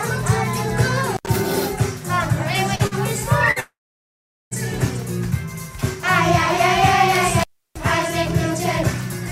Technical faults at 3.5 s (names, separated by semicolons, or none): burst of packet loss; long network dropout